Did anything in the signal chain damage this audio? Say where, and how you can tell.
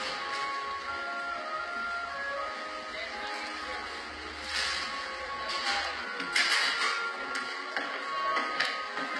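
Yes, at the codec stage, all the way through. The top end stays bright but sounds gritty and metallic, with highs that don't track the lows. That's likely HE-AAC compression at a very low rate, around 16 kbps, rebuilding treble by copying lower bands upward.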